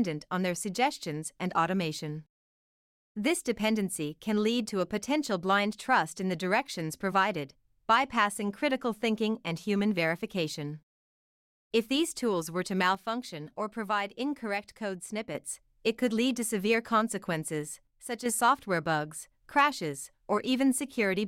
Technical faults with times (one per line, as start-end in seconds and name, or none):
12.95-15.35 one channel drops out
17.87-18.26 one channel drops out